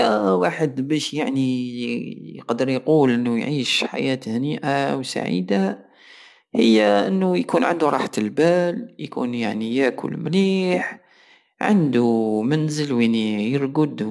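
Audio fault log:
No fault is present.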